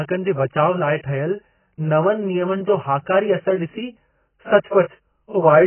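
AAC compression affects this speech clip from start to finish. Nothing remains above 3.1 kHz, and what is left sounds heavily damaged, dull and smeared. The likely cause is AAC-LC coding at a very low bitrate, consistent with about 12 kbps, which forces a low cut-off and coarse quantisation.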